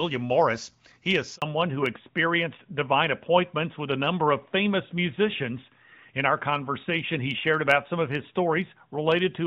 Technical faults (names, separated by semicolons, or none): handover gap; fallback to narrowband